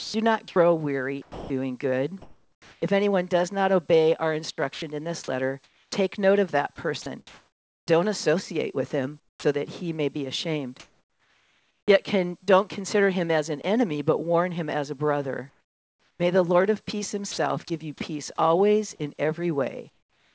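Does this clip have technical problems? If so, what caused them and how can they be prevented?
Yes. Sound chopped by the voice detector occurs at 0.00–2.82, 4.56–9.44, 10.80–13.64 and 15.50–17.70 s. Quiet parts flip to synthetic comfort noise, roughly 0.8–1.3 s per stretch. The likely cause is the sender's voice detector gating too aggressively. To prevent it, disable discontinuous transmission or lower the detector's threshold.

Comfort noise replaces the background from 19.90 s to the end. The real background, about 41 dB below the loud parts, becomes smoother noise about 7 dB quieter. This is likely discontinuous transmission stopping the audio during the pause. Turning off discontinuous transmission keeps the real background.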